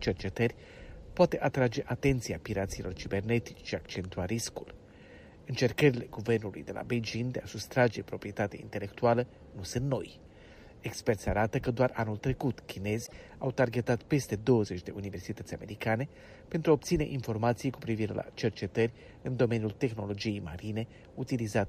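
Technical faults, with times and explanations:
13.02–13.13 s, damaged data in a compressed stream: a brief glitch of about 0.11 s cuts through the sound. Corrupted bytes in the encoded stream made the decoder misread those frames, lose sync and hunt for the next valid frame header.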